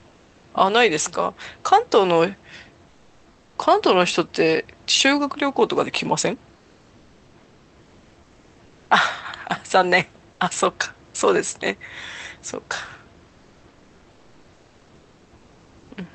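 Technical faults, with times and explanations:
0.00–0.43 s and 2.89–3.55 s, comfort noise in place of the background: in these pauses, about 0.43 s and 0.66 s long, the faint room background, about 35 to 37 dB below the loudest sound, turns into a smooth, textureless hiss that sits about 2 to 3 dB lower, then switches back when the sound resumes. The likely cause is Opus discontinuous transmission: the sender stopped sending during silence, and the receiver filled the gap with synthetic noise shaped only roughly like the real background.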